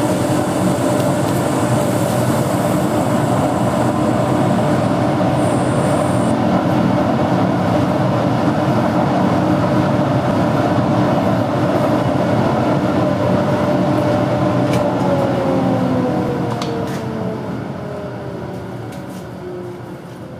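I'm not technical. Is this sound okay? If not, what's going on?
No. At 10.31 seconds the sound briefly skips: a tiny sliver, roughly 20 milliseconds, goes missing, and the audio on either side is joined straight together with no gap of silence. This is audio missing between chunks. The likely cause is that the recording or processing was done in pieces of about 6 seconds, and a small bit was lost while one piece was closed and the next one started.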